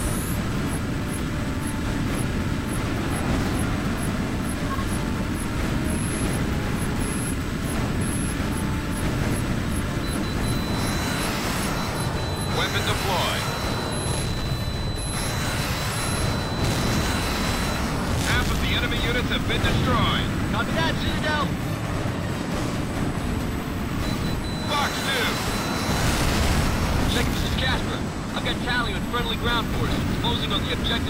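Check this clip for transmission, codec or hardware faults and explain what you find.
There's one hardware fault here, and it runs the whole way through: USB whine. A steady, fixed-pitch tone sits at 8 kHz, with its strongest component at 16 kHz, roughly 30 dB under the sound. That 8 kHz spacing points to the 125-microsecond microframes of a high-speed USB bus, whose periodic current draw is leaking into the audio through power or ground. You hear it as a thin, high whistle that doesn't move with the content.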